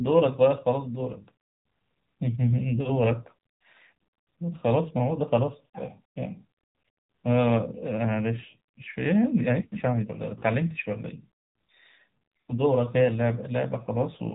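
AMR narrowband mobile codec coding runs through the whole of this speech clip: nothing above about 3.8 kHz survives, and the plainly audible buzzy, synthetic edge from pulse-driven vocal-tract modelling in 20 ms frames fits a low AMR-NB mode of around 7.4 kbps.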